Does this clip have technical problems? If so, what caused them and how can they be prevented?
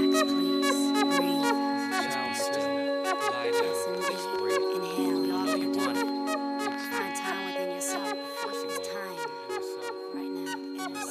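Yes. A train of clicks runs from 3.95 to 6.85 s, likely caused by interference from nearby equipment or a faulty connection or power supply injecting repeated pulses. Around thirty similar pops arrive at an uneven pace, about 8.6 per second, peaking around 5 dB above the sound and ticking across it. Keeping cables and the interface away from noisy electrical equipment, and checking the interface's connection and drivers, would prevent it.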